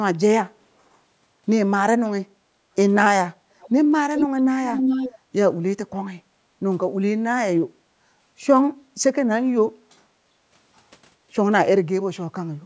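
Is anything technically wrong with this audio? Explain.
Yes, two kinds of fault are audible.

Background gated by the echo canceller occurs at 2.35 to 2.45 s and at 6.24 to 6.52 s. The room sound sags by about 6 dB for a few tens of milliseconds in the first case, then by about 11 dB for roughly a sixth of a second in the second. This happens when the echo canceller clamps the microphone down while the far-end loudspeaker is active and then releases it. Unlike a network dropout, the audio never goes fully silent or glitches. Only the ambience ducks and then recovers.

An echo leak is heard as a delayed copy of the speech arriving 0.4 s late. It is faint at 3.6 to 3.7 s, about 25 dB down, and then at 4.16 to 4.41 s and 4.66 to 5.15 s it is roughly as loud as the speech itself. This is likely a far-end speakerphone whose canceller failed to remove its own loudspeaker pickup and sent it back. 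What separates it from reverberation is the fixed, distinct delay: a discrete repeat rather than a smooth decaying tail.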